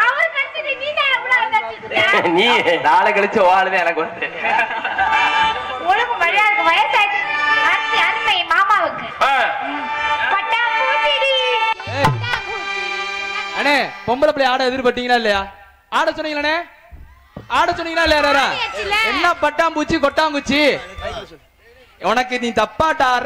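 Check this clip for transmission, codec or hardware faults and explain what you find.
Hard clipping is present for the whole clip. The signal is driven about 8 dB beyond what one stage can pass, so around one percent of samples hit the ceiling and are cut flat. Those squared peaks add high harmonics, heard as crackle on the louder moments.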